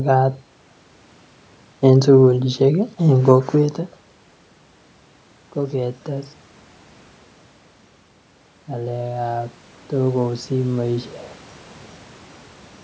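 From 8.67 to 11.15 s the automatic gain rises. Having judged the input too quiet, the gain control lifts by about 4 dB over two and a half seconds, so speech and room noise swell together. The waveform envelope and noise floor climb in step, and the spectrogram brightens evenly.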